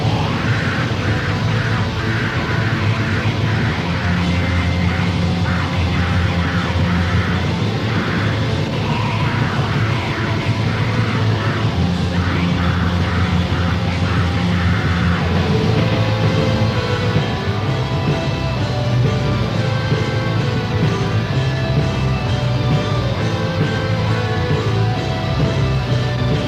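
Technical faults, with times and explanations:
15.35 to 17.19 s, doubled audio track: a second, full-band copy of the sound runs about 150 ms behind the original, at roughly the same level, so every onset is followed by a distinct slapback repeat. The copy has no decay or room colouring and cuts in and out abruptly at both ends. This is likely a second capture through a slower path or an edit leaving two out-of-step copies overlapping.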